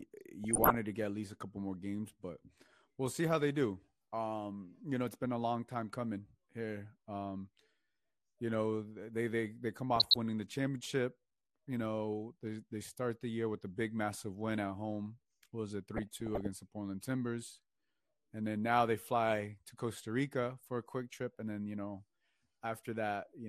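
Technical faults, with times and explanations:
Throughout: MP2 compression. The speech sounds dull and gurgling, with a granular roughness, and the damage is plainly audible. The likely cause is MPEG Layer II coding at a low rate, around 80 kbps. That codec divides the spectrum into 32 sub-bands and shares out a small bit budget among them, so upper bands drop out or flicker in and out, and the remaining bands are quantised coarsely enough to leave a gritty, bubbling texture.
0.44 to 0.75 s, 9.96 to 10.16 s, 15.94 to 16.47 s: DAB burbling. Three short bursts of burbling sit over the speech. The first comes just before "to get at least", the second between "they they they come" and "winning the championship", and the third just after "was it". The sound points to a weak-reception error rate of around 0.4 to 0.5 percent letting corrupted bits into the MP2 stream. Damaged samples put short blips of noise into single sub-bands, and damaged scale factors make sub-bands leap in level for up to a frame, and this gives the burbling.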